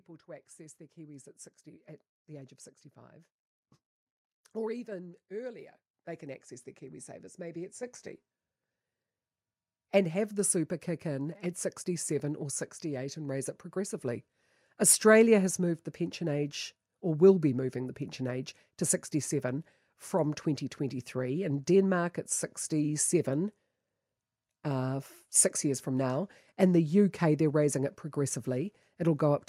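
At 5.94 s and again at 7.83 s, the microphone volume is stepped up, by about 7 dB and then about 5 dB. Speech and background noise jump together instantly, unlike a talker growing louder or a gradual gain ramp, because the device input level itself changed.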